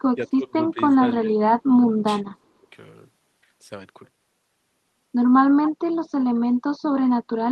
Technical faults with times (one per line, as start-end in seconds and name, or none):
0.15-1.47 speech suppressed in double talk
1.74-2.67 speech suppressed in double talk
5.65-5.70 echo leak
6.89-7.15 speech suppressed in double talk